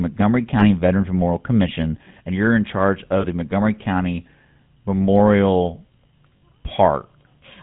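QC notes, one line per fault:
Throughout: GSM full-rate codec. The speech has a buzzy, gravelly roughness and nothing above 4 kHz. It matches the 13 kbps GSM coder, which rebuilds speech from a vocal-tract model driven by sparse, regularly spaced pulses and discards the rest of the excitation.
0.6–0.66 s, 3.2–3.25 s, 6.36–6.43 s: lost GSM frames. Each gap is a short, rough, metallic ring in place of the speech, lasting about 20, 40 and 60 ms respectively. This fits one, two and three dropped frames, each covered by repeating the last good frame.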